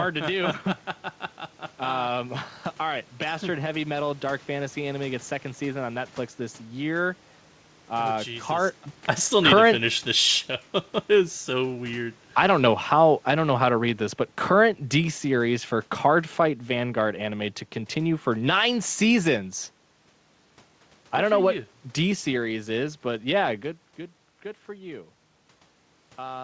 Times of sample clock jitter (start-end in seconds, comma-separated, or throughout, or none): none